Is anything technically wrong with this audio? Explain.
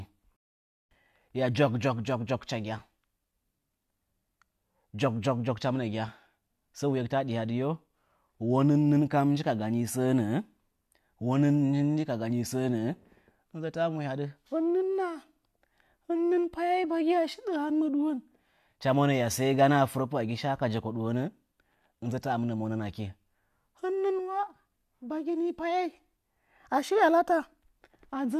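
No, the speech signal shows no technical faults at any point in the recording.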